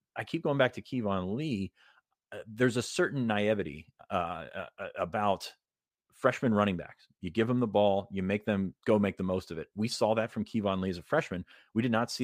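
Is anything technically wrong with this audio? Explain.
No, nothing technically wrong can be heard in this speech recording. There is no fault to point to anywhere in it.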